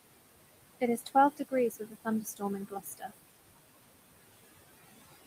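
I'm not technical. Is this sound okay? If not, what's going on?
No. Noise suppressor artifacts run through the whole clip: a filter keeps pushing the background noise down between the words, and it rises again under the speech. The room's own background noise sits underneath.

There is also speech cut by the noise suppressor, at 0.81 to 1.15 s, 1.70 to 2.07 s, 2.23 to 2.42 s and 2.68 to 3.14 s. The filter mistook parts of the speech for noise and turned them down, so brief pieces sound swallowed or faint, worst in the last stretch.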